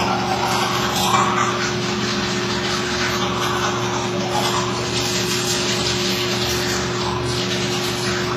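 An everyday sound recording carries mixed compression damage from start to finish. Nothing is present above 14.9 kHz, so the top end is cleanly cut away. Smeared, swirly artefacts sit alongside a separate layer of metallic, synthetic-sounding high detail. Two different kinds of coding damage are heard at once. This is likely transcoding between lossy codecs. The pattern fits a low-rate WMA encode, around 24 kbit/s, later re-encoded to HE-AAC at a similar rate. The second codec spent bits on the first one's errors and added its own.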